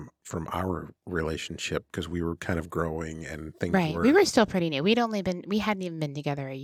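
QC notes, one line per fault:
Nothing to flag on this speech clip, no faults heard anywhere in it.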